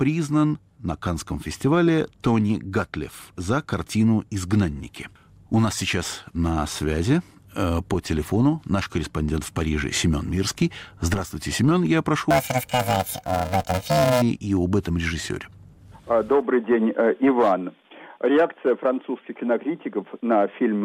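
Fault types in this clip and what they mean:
Planar audio read as interleaved, 12.31 to 14.22 s: blocks holding all left then all right samples are read as alternating pairs, so each 2.67 ms block plays twice at double speed. Blocks this short give a robotic 375 Hz buzz, not an octave shift, which fits 128-sample blocks.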